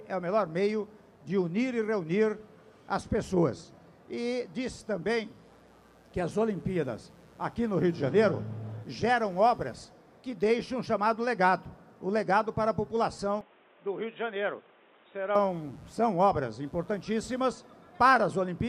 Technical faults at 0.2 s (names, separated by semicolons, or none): none